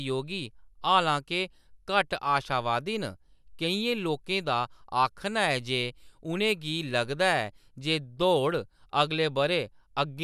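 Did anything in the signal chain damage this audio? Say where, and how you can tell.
No, nothing in this speech recording stood out on listening as damage from any stage of the signal chain.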